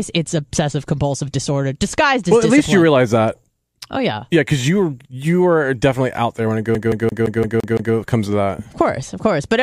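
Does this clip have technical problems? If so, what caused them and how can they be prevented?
Yes. After "out there when it", from 6.75 to 7.94 s, the speech has the CD stuck on one turn fault. A damaged spot knocks the laser back one track each revolution, so the same 0.17 s segment replays seven times, with a brief mute at every jump, before "comes to that" resumes. A waveform shows seven identical blocks split by tiny gaps, and a spectrogram shows a repeating pattern cut by thin vertical silences. Cleaning or replacing the disc, or ripping it with error-checking software, prevents this.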